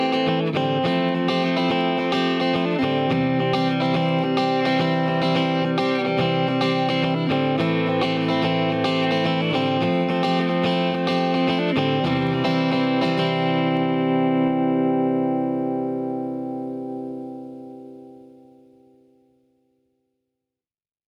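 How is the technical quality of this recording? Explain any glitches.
The recording has one persistent problem. Gain pumping runs throughout: the input gain is likely set far too high, so a fast limiter or compressor clamps down on every loud sound, swinging the level by around 10 dB. Loud and soft parts end up closer in level, leaving the dynamics flattened and squashed.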